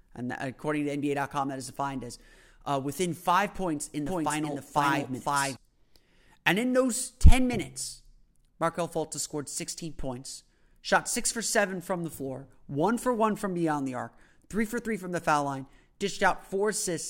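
A doubled audio track runs from about 4.1 to 5.6 s, just after "within five points in". A second, full-band copy of the speech trails the original by around half a second at roughly equal loudness, giving a clean, dry repeat with no decay or room colour. It starts and stops abruptly. The likely cause is a slower second capture path or an edit holding two out-of-step copies.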